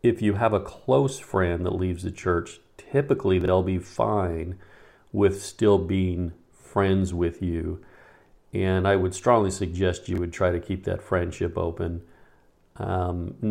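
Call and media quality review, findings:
Chunks out of order at 3.41–3.48 s (after "leaves the church typically") and 10.13–10.18 s (after "I would strongly suggest"). A 21.33 ms block played two and then one chunk late. Jumbled sound, three hard joins each. Probable component: jitter buffer or write queue.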